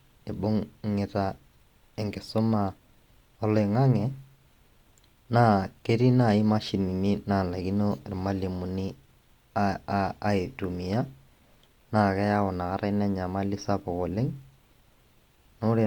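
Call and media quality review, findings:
No audible faults in the speech; nothing to action.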